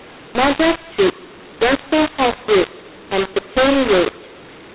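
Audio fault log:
throughout: mu-law and A-law mixed up. The speech sounds harsh and gritty, with its levels scrambled and a rough noise filling every pause instead of silence, all within the narrow band below 4 kHz of ordinary telephone audio. The 8-bit samples were written with the A-law curve but read back with the mu-law curve, so each code maps to the wrong level, swelling some, shrinking others and lifting the quietest ones well above zero.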